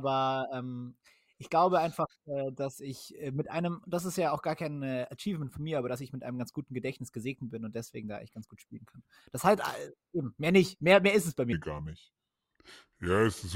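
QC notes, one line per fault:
11.53–13.56 s, section at the wrong speed: the final two seconds play back at 0.755 times the original rate, so everything turns slow and drops about five semitones in pitch at once, with tempo and pitch falling together. The likely cause is a playback or edit stage running this segment on the wrong clock. On a spectrogram the harmonics step down abruptly at 11.53 s and events stretch horizontally. The waveform shows longer, lazier cycles and drawn-out envelopes.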